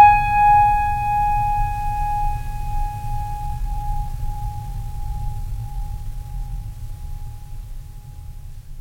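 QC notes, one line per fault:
3.44–6.72 s, time-stretched section: the music suddenly rushes forward at about 1.46 times its normal pace while the pitch holds steady, so it sounds hurried before settling back. Likely software squeezed this stretch to fit a shorter length by dropping short slices. On a spectrogram, harmonic lines keep their height but note events crowd closer together; the waveform shows compressed envelopes with small discontinuities where slices were removed.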